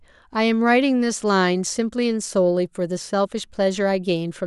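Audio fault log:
Nothing to log here; the speech comes through without a single fault worth noting.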